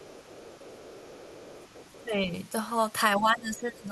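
From 0 to 2.05 s, the other side's voice leaks through faintly, about 25 dB below the talker. An echo canceller likely left loudspeaker sound in the microphone. From 2.05 to 2.3 s, and again from 3.17 s to the end, the talker's speech is suppressed in double talk. Both sides spoke at once, and the canceller likely turned both down. The first dip is around 10 dB. The second is deeper, around 20 dB.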